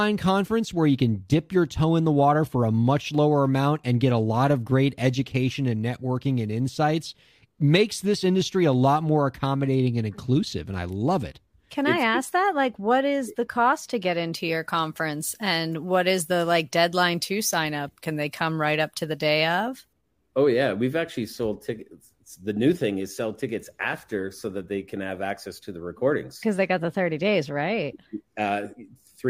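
From 14.33 to 19.93 s, the speech has pre-emphasis left on. The treble lift applied for transmission, which matches a 75-microsecond FM curve, was never undone by the complementary de-emphasis on playback. As a result, the top end sits about 13 dB higher at 10 kHz than at 1 kHz. For those 5.6 seconds the speech turns thin, glassy and overly bright, with sibilants that hiss and spit.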